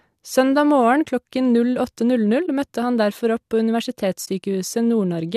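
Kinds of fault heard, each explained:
Corrupt frame concealed: damaged bits in a compressed frame were caught by the decoder, which filled that slot with its own substitute instead of playing garbage. In this speech it hits two brief spots, at 2.46 to 2.48 s just before "møtte han derfor" and at 4.25 to 4.28 s, each short enough to fit a single frame.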